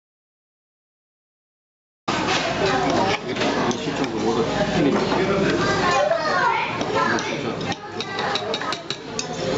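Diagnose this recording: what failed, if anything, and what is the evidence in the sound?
Right from the start the file is silence until about 2.08 s, with no room tone at all, so this is an audio dropout to silence. Most likely the input was lost, through a cable, device or link, while the recorder kept writing silence.

After that there's gain pumping the whole way through. The level swings by something like 15 dB with each loud sound, leaving everything squashed. The likely cause is mic gain set far too hot, with a fast limiter clamping down. The band stopping at 8 kHz is just the normal call processing.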